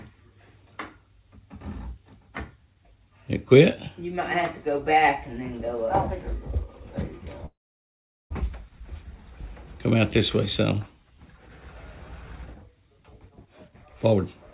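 From 7.46 to 8.32 s there is a call audio freeze: a brief fading tail, then about 0.78 s of silence, likely from delayed packets. The sound resumes intact, so nothing is skipped, unlike a dropout.

From 12.98 to 14.19 s a jitter buffer speed-up runs the audio at 127% speed, trimming roughly 0.3 s. The pitch stays unchanged, unlike resampling. Throughout, the band stops at 4 kHz, consistent with G.711.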